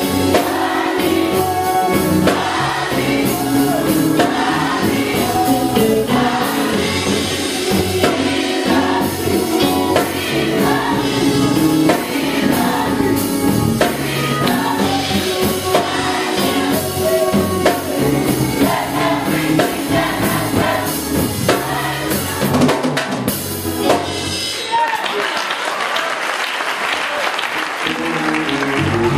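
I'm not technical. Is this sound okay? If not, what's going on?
Yes, this sound is okay, with nothing going wrong anywhere in the recording. There is nothing here that needs fixing.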